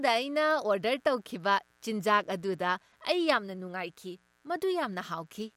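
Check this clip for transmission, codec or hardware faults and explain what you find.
Mains buzz runs throughout this speech clip, from start to finish, based on a 60 Hz mains supply. It gets in as sharp switching spikes, twice per mains cycle, from something like a dimmer, a rectifier or a missing shield. Those spikes carry a dense stack of harmonics of 60 Hz reaching up into the kilohertz range, which is why it sounds raspy rather than like a smooth hum. It sits quietly under the signal, roughly 40 dB down, as a steady buzz.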